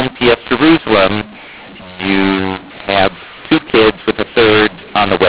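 From the first moment to the end, the speech carries a mu-law and A-law mixed-up fault. The audio was encoded with the A-law companding curve but decoded as mu-law, so every 8-bit code maps to the wrong level. Loud and soft passages come out scrambled, the result sounds harsh and gritty, and pauses are raised into a constant noisy bed instead of near silence. The underlying 8 kHz G.711 telephone band limit, with nothing above 4 kHz, is still audible beneath the distortion.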